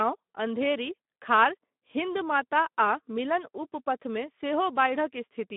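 Throughout, the speech carries Speex codec damage at about 11 kbps: narrowband, nothing above 3.8 kHz, with a hoarse, noisy CELP excitation making it rough.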